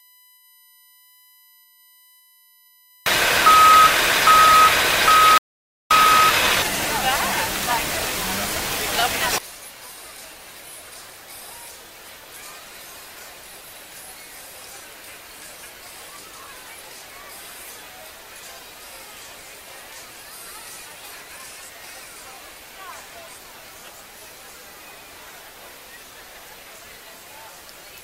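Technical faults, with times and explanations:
Throughout: USB whine, a fixed-pitch tone built on a 1 kHz fundamental, with its strongest component up at the 13th multiple, 13 kHz, sitting roughly 35 dB below the sound. The bus polls in 1 ms frames, so a steady current pulse at that rate leaks through shared power or ground into the analogue input. The result is a thin whine made of harmonics of 1 kHz.
5.38 to 5.91 s: audio dropout to silence, a gap of about 0.53 s where the sound cuts off abruptly and then resumes mid-flow. The gap is silent, with no room tone or background underneath, so the signal itself stopped reaching the recorder while it kept writing silence. The likely cause is a momentary loss of the input, such as a brief disconnect or failed link, and whatever sounded during that half second is lost.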